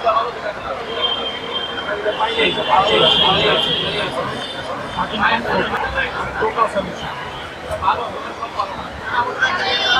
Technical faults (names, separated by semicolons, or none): doubled audio track